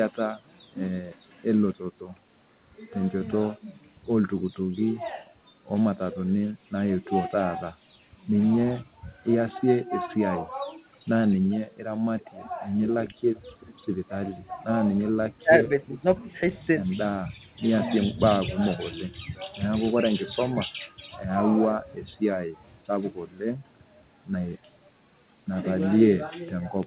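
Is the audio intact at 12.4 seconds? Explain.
No. From 12.2 to 13.15 s there is an echo leak: a faint, delayed copy of the speech trails the original by about 0.39 s, sitting far below it in level. This is likely the far end's loudspeaker being picked up by its microphone and not fully removed by the echo canceller. Unlike room reverberation, which decays smoothly right behind each sound, this is a distinct repeat at a fixed lag.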